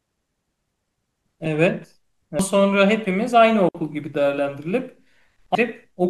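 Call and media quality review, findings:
Damaged data in a compressed stream at 0.00 s, 2.39 s and 5.55 s. Short glitches in the speech. Component: decoder input. Mechanism: corrupted bytes in the compressed frames, so the decoder misreads them, loses frame sync and jumps to the next valid header. The three hits are isolated and instantaneous, which points to scattered corruption in the stream or file.

Digital wireless dropout from 3.69 s to 3.75 s. A clean 60 ms hole of near silence with a very short fade. No noise burst before or after. Component: digital wireless link and receiver. Mechanism: too much data lost over the air, so the receiver mutes instead of passing garbage. The clean edges separate it from the decoder blips.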